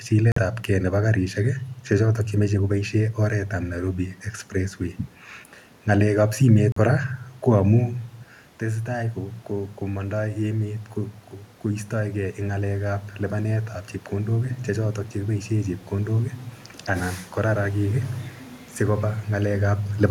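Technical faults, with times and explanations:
0.32–0.38 s and 6.72–6.78 s, Bluetooth stall: the audio cuts to 45 ms and 43 ms of silence and then resumes, likely from a drained headphone buffer. Each appears as a flat waveform and a blank vertical gap on the spectrogram.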